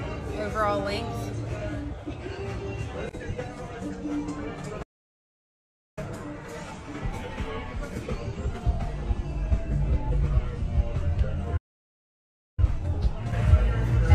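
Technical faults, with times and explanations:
4.82–5.98 s and 11.57–12.59 s, playback stall: the audio just drops to silence mid-flow, for about 1.14 s and then about 1.01 s, before picking up again. Most likely the player ran dry of data or its thread got blocked, leaving nothing to output.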